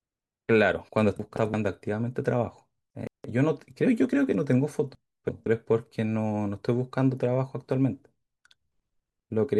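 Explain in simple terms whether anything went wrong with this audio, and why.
Chunks out of order occur at 1.20–1.54 s, 2.90–3.24 s and 4.95–5.46 s. Short pieces of speech, about 0.17 s each, play too late. The speech jumbles briefly.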